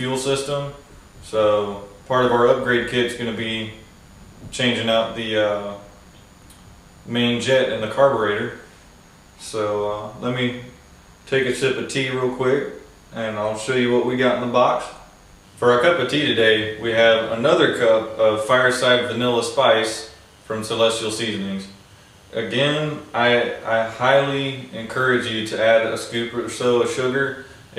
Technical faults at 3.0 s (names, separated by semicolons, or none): DECT cordless phone buzz